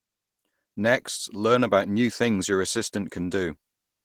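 From start to end the speech has the rough, hoarse, slightly muffled grain of heavy Opus compression, likely from the speech-oriented hybrid mode at a rate around 16 kbps. A spectrogram shows smeared, noise-filled bands where harmonics should be distinct, though content still reaches the top of the spectrum.

At 2.76 s a single sharp click cuts in, which points to dropped samples: only a couple are missing, so the waveform jumps abruptly to a later value. The spectrogram shows a thin vertical line spanning all frequencies, with a visible step in the waveform.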